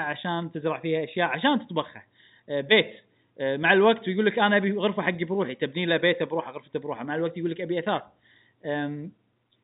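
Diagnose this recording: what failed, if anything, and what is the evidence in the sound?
Nothing's gone wrong here: the speech simply carries the usual signature of G.711 telephone coding, with the top end stopping at about 3.9 kHz, which fits a narrowband 8 kHz-sampled phone path, and there's no fault to point to anywhere in it.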